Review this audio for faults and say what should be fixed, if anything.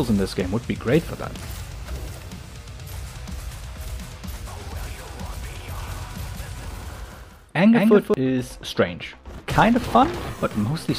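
From 5.80 to 8.14 s, a doubled audio track: a dry, full-band copy trails about 200 ms behind, roughly 5 dB quieter, likely from a second capture path. Spectrograms and waveforms show each onset repeated at that fixed offset. Prevent it by recording or monitoring through a single capture path.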